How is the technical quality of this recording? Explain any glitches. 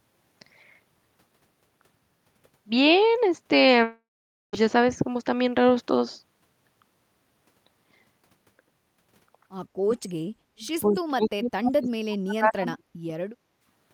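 The recording has three kinds of glitch: a long gap early on, repeated loss of the talker's speech near the end, and a brief dip in the room sound just before it finishes.

From 3.83 to 4.55 s there is a long network dropout. About 0.7 s of audio likely never arrived, and the receiver stretched the last sound into a fading buzz or hiss, with about 0.49 s of near-silence. On a spectrogram, smeared energy thins into a blank band before speech resumes.

Between 9.84 and 13.14 s the speech is suppressed in double talk, likely because the echo canceller confused the talker with loudspeaker echo while both sides spoke. The voice dips or cuts out from 9.84 to 10.64 s, 10.81 to 12.84 s and 13.07 to 13.14 s. The waveform shows deep notches of roughly 35 to 40 dB, with a shallower one near the end.

At 13.52 to 13.65 s, the background is gated by the echo canceller. While the loudspeaker played, the microphone was turned down by about 10 dB for roughly 150 ms. 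The room tone dips briefly, visible as a short, faint gap in the noise floor.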